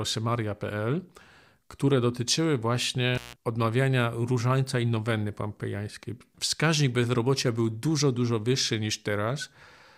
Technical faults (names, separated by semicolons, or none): intermittent contact